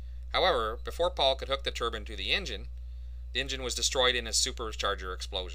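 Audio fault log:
Nothing to log here, since no fault turns up anywhere in this audio.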